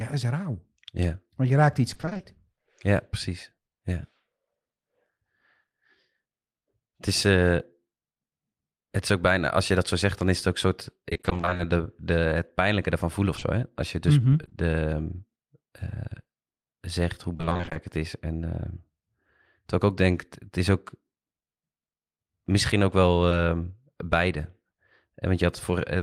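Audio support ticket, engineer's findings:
Repeated packet loss (robotic sound): choppy stretches at 1.93–2.25 s after "je raakt iets", 11.09–11.61 s before "de de het pijnlijke", and 17.33–17.77 s, each about half concealed. Sparser at 13.35–14.53 s after "het pijnlijke ervan voelen". Network-side loss; gaps fit 20 ms packets, each patched by extending prior audio.

Short concealed packet loss: brief smear at 23.29–23.33 s. A single dropout, consistent with one 20 ms packet, is filled by the receiver's concealment, which continues the preceding sound and then crossfades back into the decoded stream.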